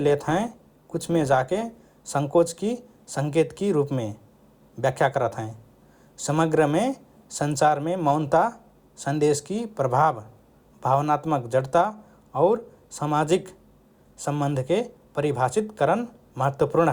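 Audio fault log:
0.00–2.00 s, adaptive stream starting at a low bitrate: the speech opens dull and smeared, with thin or artificial-sounding treble and clearer codec artefacts. At 2.00 s it turns abruptly fuller and cleaner, with no gap or dropout. The player began on a low-quality rendition so it could start quickly, then switched up once it had gauged the connection. The before-and-after sound points to a jump from roughly 32 to 64 kbit/s Opus.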